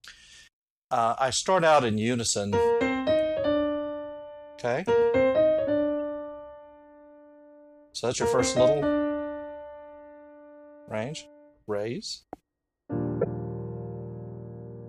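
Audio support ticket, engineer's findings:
Corrupt frame decoded at 13.21–13.26 s: short chirp-like burst, 50 ms, peaking around -10 dBFS. Probable component: decoder fed damaged bitstream. Flipped bits in a couple of compressed frames misread gains and codes, putting energy at the wrong frequencies for the damaged frames.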